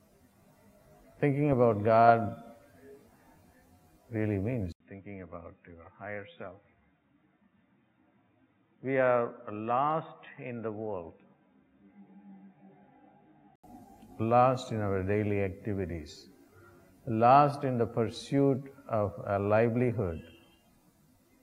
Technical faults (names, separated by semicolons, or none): input switched to a poorer device